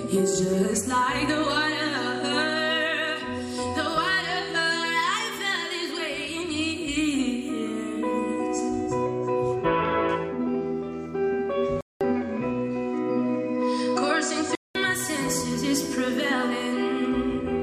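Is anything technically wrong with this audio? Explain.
Yes. From 11.81 to 14.75 s, the input likely switched to a poorer device. A 200 ms silence marks the switch. The narrower band then cuts everything above 9.2 kHz, and faint new background noise appears.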